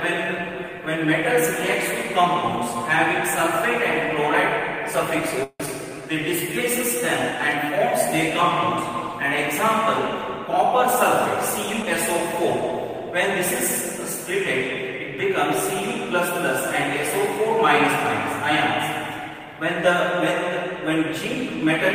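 Long network dropout at 5.43 to 5.69 s: the sound holds on as a fading buzz for about 230 ms, then a brief silence of about 50 ms, before resuming with roughly a tenth of a second gone. A stretch of packets that never arrived is the likely cause, and playback runs about 70 ms later afterwards.

Jitter buffer slow-down at 5.89 to 6.53 s: right after the dropout, the receiver rebuilds its reserve by repeating single pitch periods and bits of pauses, adding 61 ms. The sound runs at 92% speed with unchanged pitch, so it feels drawn out.

Dropped samples at 7.52 s, 13.41 s and 18.06 s: each is a single sharp click, a thin vertical line across the spectrum, where the waveform jumps straight to a later value. A tiny gap of a fraction of a millisecond in the sample stream is likely, far too short to remove any sound.

Skip ahead at 11.82 to 11.85 s: playback leaps forward over roughly 70 ms of sound, with only an 8 ms join bridging the two sides. 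Audio already waiting in the buffer was played early, and the delay drops by about 50 ms.

Jitter buffer speed-up at 19.30 to 19.61 s: the receiver trims short runs of pitch periods, around 50 ms in total, to shed excess delay. The sound briefly runs at 115% speed with unchanged pitch, giving a hurried feel.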